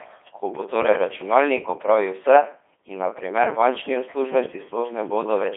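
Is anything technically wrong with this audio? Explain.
Yes. Throughout, the speech has a Codec 2 vocoder character. It is rebuilt from pitch and envelope as sine waves, so it sounds robotic and buzzy, with nothing above 3.7 kHz. It runs at about 2.4 kbit/s, and unlike plain bandwidth limiting, the waveform itself is gone.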